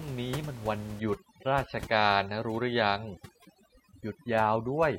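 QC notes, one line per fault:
1.00–4.99 s, overdone noise removal: with the room noise sitting about 17 dB below the speech, the suppression gates individual frequency bands hard whenever they approach the noise estimate, so the background drops and breaks up into twinkling specks, and quieter speech components vanish.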